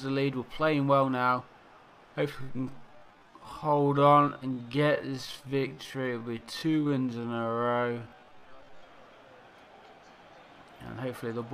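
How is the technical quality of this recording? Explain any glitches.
There's one glitch: a time-stretched section from 2.31 to 8.87 s, where the audio drops to about 0.58 speed with unchanged pitch. It's likely a stretch algorithm repeating short slices, so it drags.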